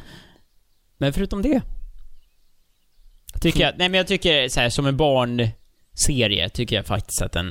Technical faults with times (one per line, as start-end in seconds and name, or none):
none